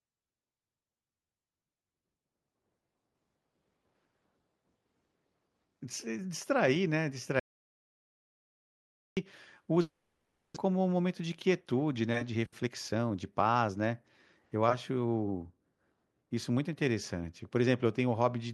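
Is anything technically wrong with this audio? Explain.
Yes, three separate faults interrupt or distort this speech recording.

From 7.40 to 9.17 s there is an audio dropout to silence. The sound cuts off abruptly and about 1.77 s of silence follows, with no room tone, before it resumes mid-flow. The likely cause is a lost input, such as a disconnected device or a stray mute. The hard edge and the absence of any fading tail separate it from a network loss.

From 9.81 to 10.58 s comes a long network dropout. No audio reached the receiver here. Instead of cutting out, the final sound is stretched into a decaying buzz lasting several tenths of a second, then silence. About 0.4 s of real audio is missing, and the delay shifts by roughly 0.3 s. The likely cause is packets failing to arrive. The fading fill is what marks this as a network loss.

From 12.35 to 14.63 s there is a jitter buffer speed-up. 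The receiver removed short pitch-period slices repeatedly to drain an overfull buffer, discarding roughly 0.3 s in total. The speech runs at about 113% speed and sounds hurried. The pitch stays unchanged, unlike a simple resampling error, which would raise it.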